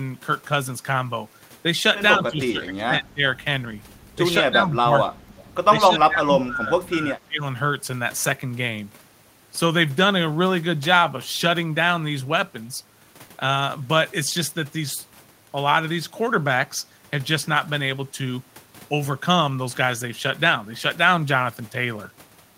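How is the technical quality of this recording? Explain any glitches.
The speech dips sharply three times early in the recording.

Speech suppressed in double talk, 2.17 to 3.23 s, 4.42 to 5.34 s and 5.78 to 7.43 s: the voice falls by roughly 20 to 25 dB in patches, likely because an echo canceller mistook this talker for loudspeaker echo while the far side played and turned both down.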